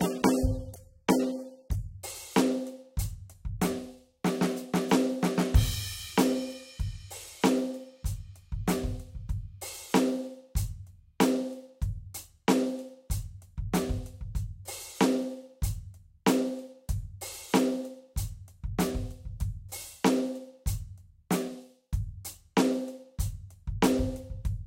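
Adaptive stream starting at a low bitrate, 0 to 2.0 s: the music begins dull and smeared, fitting a 27 kbit/s AAC version, then brightens abruptly with no gap.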